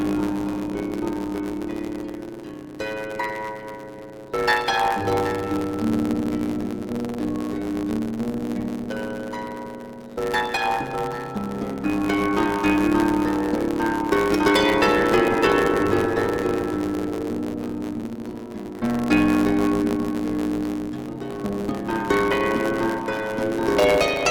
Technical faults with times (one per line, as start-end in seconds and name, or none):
0.00-24.31 block size mismatch (truncated)